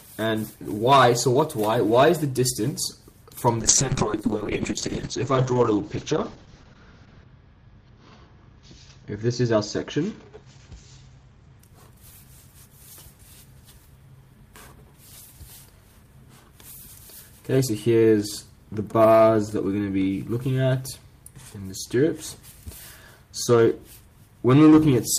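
From 3.61 s to 11.65 s there is a call bitrate drop: the connection's bandwidth estimate collapsed, forcing the encoder onto a far smaller bit budget, which fits a fall from around 32 kbps to about 7 kbps. The codec narrows the audio band from 20 kHz to 8 kHz and quantises coarsely, so the sound turns muffled, rough and watery, worst for about 3.7 s at the bottom, before brightness returns.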